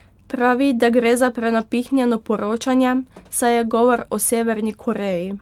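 From 1.89 to 1.95 s, a lost packet rebuilt from error correction: the speech continues without a gap, but about 40 ms sounds rougher and noisier, which fits two lost packets replaced by the decoder with the low-bitrate redundant copies carried in the following packets.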